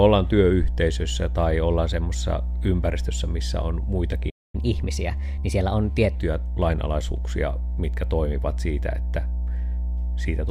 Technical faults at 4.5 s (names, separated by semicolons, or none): mains hum; playback stall; catch-up at higher speed